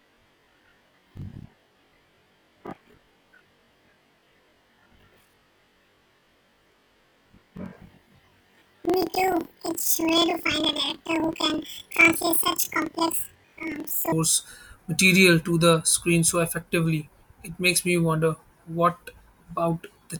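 From 0.00 to 14.14 s the speech suffers from planar audio read as interleaved. Each block stores all its left samples followed by all its right samples, but playback takes them as alternating left-right pairs. Each 42.67 ms block, which fits a 2048-sample block, is therefore played twice at double speed, left half then right half. The overall pace holds, but the speech sits an octave (12 semitones) high, with a flutter at about 23.4 Hz from the block repeats.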